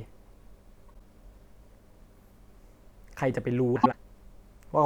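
Frames out of order at 0.88 to 1.01 s and 3.76 to 3.94 s: two neighbouring blocks of 52 ms, then 78 ms, play swapped, giving a garbled flutter. Unlike a dropout or skip, no time is lost.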